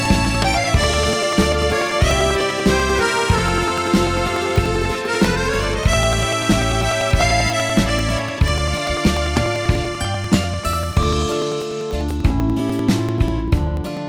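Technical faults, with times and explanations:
0.05 to 13.97 s, periodic USB or driver dropouts: something repeatedly stalls the USB bus or audio driver every 98 ms, and about 2 ms of audio is skipped each time, so the sound jumps forward in a steady ten-per-second string of small ticks wherever signal is present.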